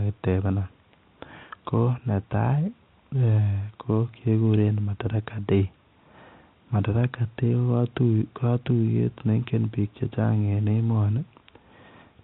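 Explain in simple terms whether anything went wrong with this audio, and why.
Nothing went wrong with this audio; the speech simply has the narrower, phone-call sound of ordinary telephone coding, which is how it is meant to sound.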